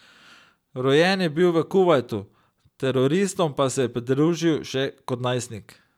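No technical faults are audible.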